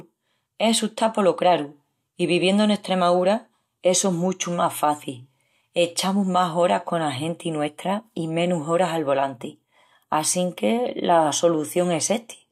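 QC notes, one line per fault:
Nothing to log on this one, as no technical faults turn up anywhere in the speech.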